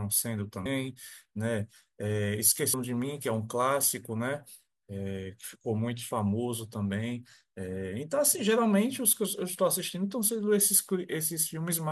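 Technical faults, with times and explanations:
0.66 s and 2.74 s, damaged data in a compressed stream: two brief, sharp blips break into the speech, each only a few milliseconds long. At these points the decoder meets corrupted bytes, misreads or drops the affected frame, loses sync and hunts for the next valid frame header, so a short garbled burst replaces the proper signal. On a spectrogram each shows as a thin vertical streak of broadband energy. On the waveform each is a tiny discontinuity or spike.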